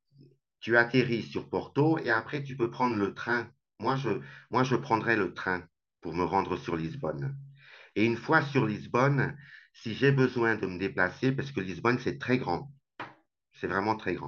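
From 2.04 to 4.52 s the speech shows channel delay (comb filtering): one channel lags the other by around 20 ms, and the mono sum cancels at evenly spaced frequencies from about 30 Hz upward. The result sounds rough and slightly doubled.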